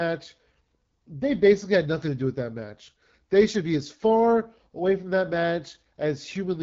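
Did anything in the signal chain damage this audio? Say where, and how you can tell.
Yes. The damage happened at the codec stage: the speech went through the AMR wideband (HD Voice) codec at a low rate throughout. The spectrum stops sharply around 7.5 kHz, and the voice sounds plainly rough and raspy. That points to AMR-WB running at one of its two lowest modes, most likely 8.85 kbit/s. At that rate the pulse-excited vocal-tract model cannot follow the speech detail below 6.4 kHz, and the band above it is only filled with shaped noise.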